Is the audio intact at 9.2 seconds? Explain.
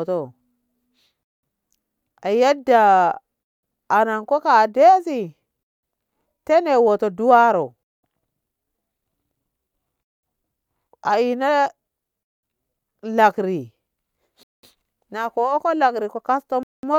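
Yes, at 9.2 seconds the speech plays through cleanly, with no dropout, click, distortion or other fault audible at that point.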